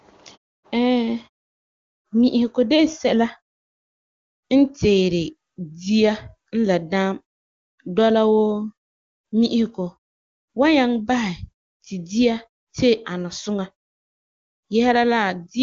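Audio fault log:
Nothing stood out on listening to this speech clip.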